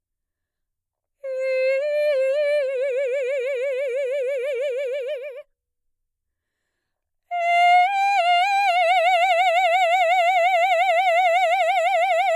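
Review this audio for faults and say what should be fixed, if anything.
Nothing needs fixing, as no technical faults can be heard anywhere in the music.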